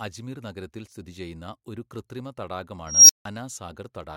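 A speech recording with an unstable filter fault between 2.87 and 3.25 s. A high tone, around 5 kHz, appears and swells sharply over about 0.23 s until it clips. Then the sound drops out completely for about 0.16 s. This points to a recursive filter running with bad coefficients. Its output feeds back and grows without limit, saturates, then overflows. The audio stays silent until the filter resets.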